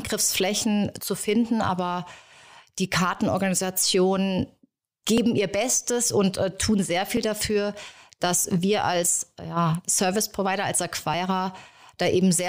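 From 1.21 s to 11.14 s, periodic USB or driver dropouts recur every 1.99 s, each skipping roughly 10 ms of speech and leaving a regular tick.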